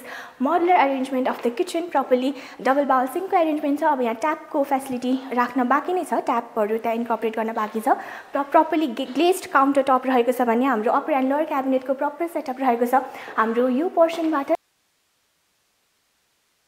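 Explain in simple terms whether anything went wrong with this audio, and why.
Something likely broke the connection carrying the sound at 14.55 s, while the equipment after that point kept running. That is an audio dropout to a faint residue. The sound cuts off abruptly at that moment, and from there to the end of the clip only a soft hiss remains, far quieter than the sound before it. It is a sudden break, not a natural pause or a gradual fade, and the sound never comes back.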